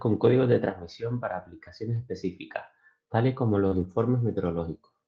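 At 1.95 to 1.97 s, right after "de transmisión para aplicaciones", a lost packet rebuilt from error correction gives 20 ms of rougher, noisier sound. A low-bitrate copy carried in the next packet filled it, so the waveform has no gap, only briefly grainier texture on a spectrogram.

From 3.67 to 3.74 s, after "aplicaciones específicas tales como", there is short concealed packet loss. About 40 ms never arrived and the decoder extrapolated the preceding sound, heard as a brief smear. A spectrogram shows smoothed, repeated harmonics or featureless noise.

Overlapping that, from 3.72 to 3.86 s, a longer lost packet rebuilt from error correction covers 80 ms, which fits four packets. It sounds coarse and hissy but continuous, with blurred, noisier spectral detail and no dropout in the waveform.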